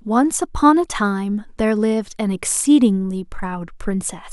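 No technical faults can be heard anywhere in the recording; the signal stays continuous and steady throughout.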